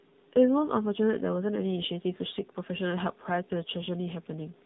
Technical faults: AMR narrowband mobile codec

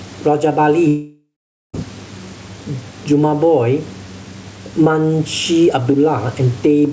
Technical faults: gain pumping; long network dropout

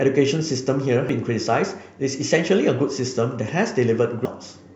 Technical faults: damaged data in a compressed stream

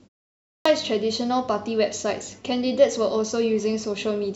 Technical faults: clipped start after a pause

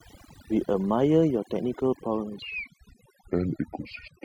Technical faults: overdone noise removal; section at the wrong speed

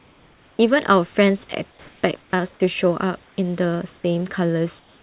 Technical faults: comfort noise in place of the background

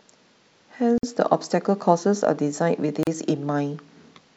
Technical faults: gap at a join of encoded pieces

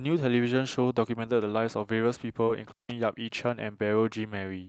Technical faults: short concealed packet loss; intermittent contact

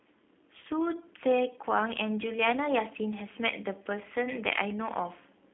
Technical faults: G.729 codec

